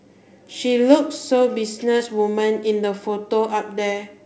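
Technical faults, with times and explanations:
1.98–2.02 s, short concealed packet loss: about 20 ms of the call arrived too late to decode, so the receiver papered over the gap by extending the preceding sound, then crossfaded back into real audio, leaving a quick smear or wobble against the band-limited call sound.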